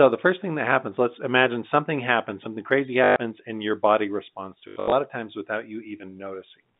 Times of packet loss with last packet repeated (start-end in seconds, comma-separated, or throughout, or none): 3.04-3.16, 4.68-4.92